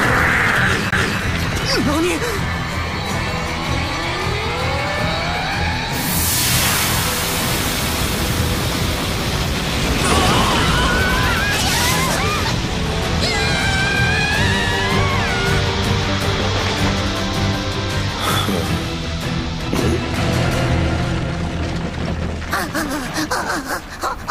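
At 0.90 to 0.93 s a CD skip occurs: the laser jumps to another turn of the disc's spiral, so playback mutes very briefly, around 20 ms, then resumes from a different point. Unlike a plain dropout, the sound jumps position instead of simply pausing.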